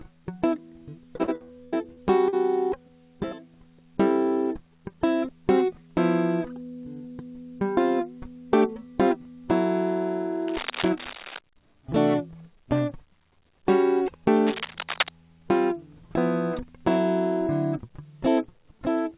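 Music, carried over a call link whose band stops at 4 kHz, which fits a 64 kbps G.711 A-law path, and from 1.16 to 2.35 s it breaks up with repeated packet loss (robotic sound). Seven short holes, the longest about 82 ms, are each patched by stretching the preceding sound, so about a quarter of that stretch is synthetic fill. This gives a choppy stutter. Unlike a single dropout, the holes recur in quick succession, and unlike clipping or distortion, pieces of the music are genuinely missing rather than merely harsh. Later, cable scratch noise appears twice, from 10.48 to 11.39 s at roughly 10 dB below the music and from 14.36 to 15.09 s at only a few dB below it. These are dense, irregular bursts of rustling laid on top of the music, most likely from a worn cable, connector or control being moved. What separates them from codec noise or packet loss is that nothing drops out. The music continues intact underneath while the crackle is added over it, and it comes and goes with no regular rhythm.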